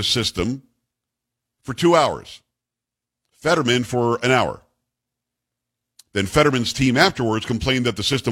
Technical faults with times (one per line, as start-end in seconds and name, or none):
0.00-8.31 sample clock jitter